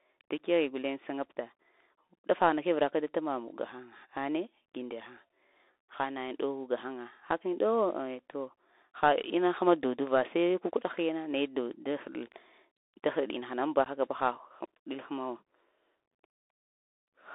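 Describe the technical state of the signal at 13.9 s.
A short, hard-edged hole of about 15 ms opens between 13.85 and 13.87 s, just before "haka ba": unconcealed Bluetooth headset packet loss, where a couple of voice packets never arrived and were filled with silence or an idle pattern. Underneath, the speech stays narrowband, scratchy on sibilants and grainy with hiss, from the Bluetooth CVSD headset codec's one-bit delta coding at 64 kbps, which limits the band to about 300 to 3.7 kHz.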